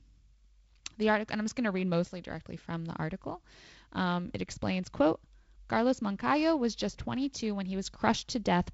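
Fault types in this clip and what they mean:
Nothing stood out on listening to this speech, which comes over a G.722 wideband telephone link at 48 kbit/s with a faint hiss in its upper band and nothing above 7.7 kHz.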